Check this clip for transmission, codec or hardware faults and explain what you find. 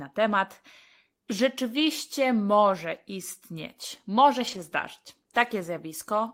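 One fault is present in this speech clip: a lost packet rebuilt from error correction, from 4.47 to 4.57 s. The audio stays continuous through that stretch, but the sound turns briefly rougher and noisier. The rebuilt span is about 60 ms, which fits three lost packets. Each missing packet was replaced by the low-bitrate copy carried in the following packet, Opus in-band forward error correction, so the decoder filled the hole with a coarser version.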